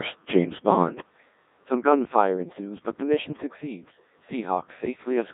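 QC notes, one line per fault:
Throughout: Codec 2 vocoder, heavy damage; speech is rebuilt from pitch and envelope via sine synthesis, giving buzzy robotic tone, unlike ordinary lossy compression, which keeps the waveform.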